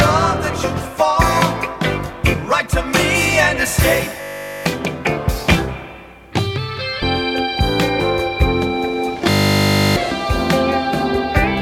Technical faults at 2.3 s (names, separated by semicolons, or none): compressed frames skipped